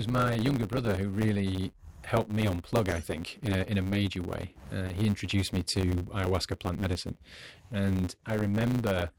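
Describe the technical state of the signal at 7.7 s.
At 7.7 s the speech is still carrying the block size mismatch (truncated) fault that runs through the whole clip. One stage is handing over longer blocks than the next one reads, so the tail of every block gets dropped. You hear that as a steady 100 Hz buzz, which fits blocks about 10 ms long. Because chunks keep going missing, the speech also plays about 1.09 times fast while keeping its timbre.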